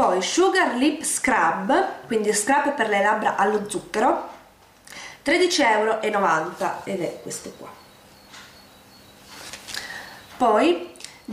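No technical faults can be heard anywhere in the audio.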